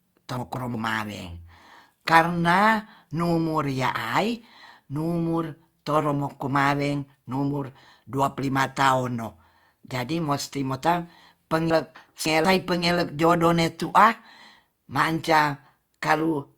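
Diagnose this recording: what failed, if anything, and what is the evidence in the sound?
Chunks out of order at 0.37 to 0.74 s and 11.70 to 12.45 s, between "jadi mosti mota" and "pengelek jodoh ne tu'a": buffer-stage misordering of 186 ms blocks, arriving one and three chunks late, leaves jumbled speech.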